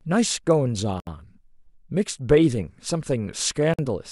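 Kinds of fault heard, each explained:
Gap at a join of encoded pieces: at 1.0 s and 3.74 s the speech falls silent for 69.5 ms and 49.3 ms, then resumes where it stopped. Separately encoded segments were joined untrimmed, so encoder start delay and last-frame padding leave holes with smeared edges.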